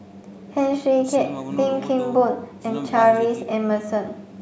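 No technical faults can be heard in the speech. The call microphone processing leaves nothing above 8 kHz and trims the lowest bass, as it normally does.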